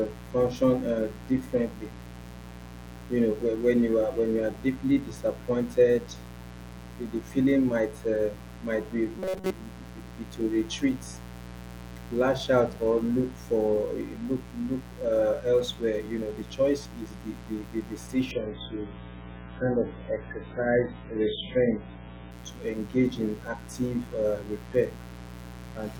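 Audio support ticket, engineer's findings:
Steady raspy buzz under the speech for the whole clip, fairly prominent, about 15 dB below the signal. Mains buzz: switching spikes from a dimmer, rectifier or unshielded run entering twice per 60 Hz cycle, with harmonics reaching into the kilohertz range. Check grounding and shielding.

Metallic, rigid buzz from 9.19 to 9.51 s, right after "uh might be". Speech contour roughly preserved, with a fixed buzz near 188 Hz. Robotic sound from repeated short buffers, likely from audio arriving too late. About 5.3 ms blocks replayed through most of that stretch while real audio is dropped.

Sudden smeared quality from 18.31 to 22.31 s, starting after "is the the the". Heavy codec artefacts, no gap at either edge. Adaptive stream at a lower bitrate: the player switched down when the connection slowed. The sound points to a drop from a normal MP3 rate to a very low one, around 8 kbit/s.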